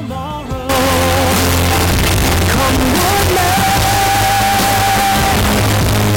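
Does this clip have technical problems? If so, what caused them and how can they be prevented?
Yes. From 0.69 s to the end, the sound turns very loud, harsh and nearly square, with background noise as loud as the main sound. This is likely float read as integer: 32-bit float samples interpreted as 32-bit integers, so sign and exponent bits dominate the amplitude. To prevent it, make sure the sample format declared in the file header or stream settings matches the format actually written.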